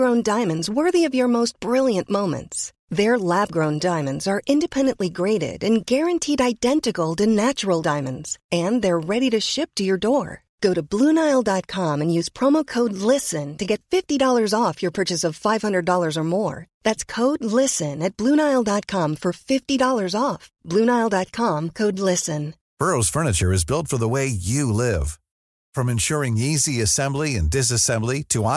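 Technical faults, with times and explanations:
Nothing in this speech recording stood out as a technical problem on listening.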